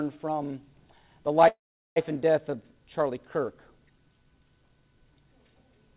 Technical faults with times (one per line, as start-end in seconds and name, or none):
1.48-1.98 call audio freeze